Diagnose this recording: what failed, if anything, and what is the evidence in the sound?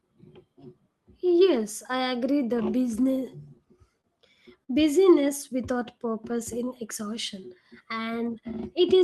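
Network and jitter buffer: scattered short gaps from 3.13 to 4.07 s, about five holes, the longest around 30 ms, filled by continuing prior sound. These show as brief smeared, repeated spectrogram slices.

Jitter buffer: a short stall from a late packet at 4.64 to 4.71 s, the last sound held 45 ms, visible as a flat, stretched harmonic band before normal flow resumes.

Jitter buffer slow-down from 5.73 to 6.70 s: repeated pitch periods add 68 ms, running at 94% speed with unchanged pitch, so waveform cycles repeat and formants stretch horizontally.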